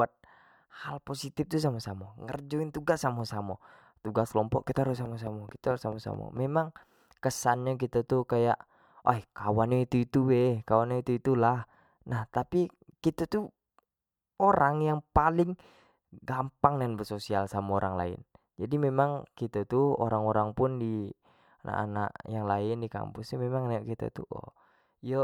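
A train of clicks runs from 5.06 to 6.38 s: about seven sharp ticks at a steady 4.57 per second, each with much the same shape. The pulses poke out a few decibels above the speech itself, so they stay prominent over the talking and carry on through any gaps. Such a regular, repeated pulse points to something injecting it, likely electrical interference from nearby equipment or a faulty connection or power supply.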